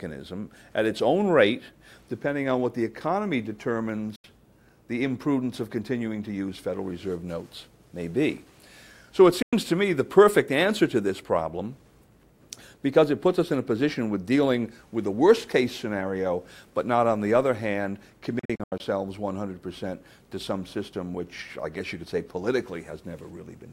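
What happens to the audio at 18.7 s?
At 18.7 s the wireless link to the headphones is likely failing to deliver audio packets in time, so they get dropped. This is a Bluetooth dropout running from 18.39 to 18.80 s. The output falls silent in several separate holes scattered across that 406 ms stretch, with about 224 ms missing in total and the longest gap lasting 81 ms. Each hole cuts in and out abruptly or with a fade of a few milliseconds, and the sound resumes further along, as though it had kept playing underneath.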